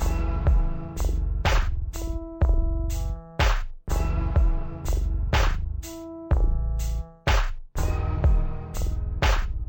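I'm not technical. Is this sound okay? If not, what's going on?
No, not quite. From start to finish, everything plays at half speed and a full octave lower than it should, so it sounds slow, heavy and sluggish. This is stereo read as mono. The file holds two channels, left and right, stored alternately, but it's being played back as if it were one channel. Each pair of samples gets stretched out in a row, which doubles the length and halves the pitch. There's also a faint, ghostly copy of the sound sitting up high.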